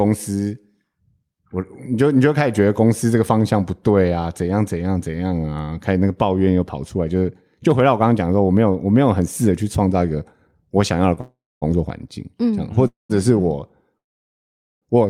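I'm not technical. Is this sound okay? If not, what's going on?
No. Near the end there are three call audio freezes: 11.21 to 11.64 s, 12.88 to 13.11 s, and 13.97 to 14.84 s. Each time, the speech stalls, the last sound trails off briefly, and then it goes quiet. The final freeze is almost all silence, for about 0.8 s. The talking then picks up exactly where it stopped, so nothing is skipped, only delayed. The likely cause is call data arriving late, leaving playback with nothing to play while it waited.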